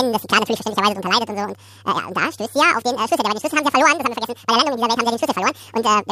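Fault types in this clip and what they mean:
Audio read two samples at a time (double speed), throughout the speech: the playback side has taken each pair of samples as a single frame, as if the stream held two channels or samples twice as wide, so every frame consumes two samples of the original. The speech races by at 2x speed and sits a full octave, 12 semitones, above its natural pitch.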